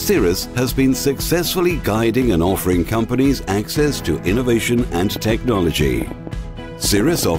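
From 5.16 s to 7.29 s, a train of clicks sits over the sound. The clicks share much the same shape. They arrive at an uneven pace, about 6.1 per second, some fifteen in all. Each stands roughly 10 dB above the surrounding audio. They are heard as a ticking, popping run that carries through any pauses. The likely cause is an outside pulse source, such as interference from nearby equipment or a faulty connection or power supply.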